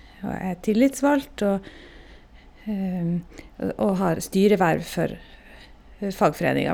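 At 1.23 s the speech hits a repeated buffer: fresh audio missed its deadline, so the device replayed its last block, about 1.33 ms long, which fits a 64-sample buffer. The single extra play and hard joins produce a brief click rather than an audible stutter.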